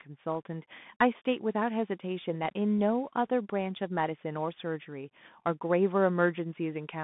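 From start to finish the speech carries the plainly audible damage of a Bluetooth CVSD headset codec. The band runs only from about 150 Hz to 3.6 kHz, so a spectrogram shows a hard ceiling with empty space above it and little energy beneath. CVSD codes each sample as a single up-or-down bit with an adaptive step, which fits a 64 kbps link. Loud, fast rises outrun that step and distort, s sounds turn scratchy, and a granular hiss sits under everything, seen as a speckled noise floor and jagged, stair-stepped waveform edges.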